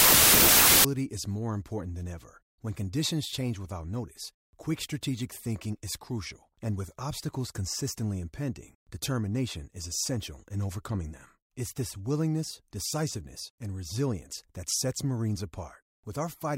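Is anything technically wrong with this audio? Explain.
Yes. From 0 to 0.85 s there is a wrong sample width fault. The speech was stored as packed 24-bit samples but read as 16-bit ones. Many values are built from mismatched bytes. Loud noise buries the speech, which plays at two-thirds speed and lower pitch.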